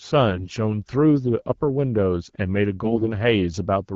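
From 0.31 to 0.58 s and again from 2.84 to 3.08 s the speech turns hoarse and gargly while keeping its pitch and level. These are AMR bit errors: flipped low-priority bits misplace excitation pulses and skew fine parameters, with over twice the error rate in the second burst.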